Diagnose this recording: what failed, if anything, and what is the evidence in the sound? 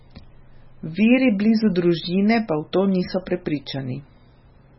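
MP3 compression, likely at the codec stage, affects the speech from start to finish. Nothing survives above 5.6 kHz, and the sound turns watery and swirly as weak frequency lines flicker between frames. The damage is heavy, which fits a bitrate near 16 kbps.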